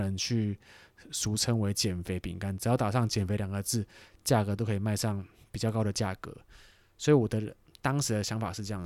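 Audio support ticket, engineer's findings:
Listened through the whole speech recording and found nothing to flag, so there's no fault to report on this one.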